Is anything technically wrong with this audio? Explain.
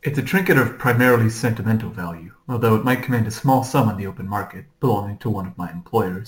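Yes. Throughout the speech there is imaging from sample-and-hold upsampling. The 16 kHz audio was raised to 44.1 kHz by repeating samples without filtering, which leaves a mirrored spectrum from 8 to 16 kHz at about 22 dB down. It sounds like a metallic fizz following the speech. A spectrogram shows the speech pattern flipped above 8 kHz, and the waveform looks stair-stepped.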